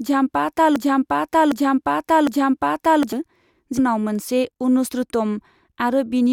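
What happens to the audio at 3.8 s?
At 3.77 s the speech jumps ahead. A short blip sits between 3.77 and 3.79 s, and the talk resumes at a later point. The likely cause is a stream segment skipped. One chunk of the segmented stream would have failed to arrive, and the player moved straight on to the next one. The missing stretch of programme is simply gone, leaving an abrupt seam and a small click.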